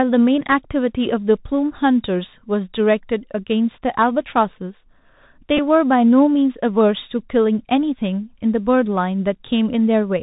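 Throughout, the Bluetooth CVSD headset codec limits the speech to a narrow band. Nothing appears above 4 kHz on a spectrogram, s sounds turn scratchy, and granular hiss fills the gaps.

At 5.57 s, a Bluetooth headset packet is repeated. Decoding old bits again over 11.2 ms, which fits three lost packets, produces a brief buzz near 267 Hz that shows as repeating waveform blocks.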